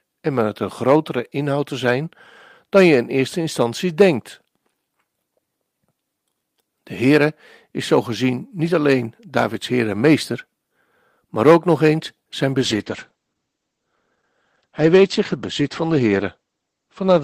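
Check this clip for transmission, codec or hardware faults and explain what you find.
One transmission fault: a call bitrate drop from 12.63 s, just after "ook nog eens zijn", lasting to the end. The bandwidth estimate fell and the encoder coarsened, consistent with roughly 32 to 11 kbps. Top end is cut at 8 kHz, so the speech turns muffled and rough.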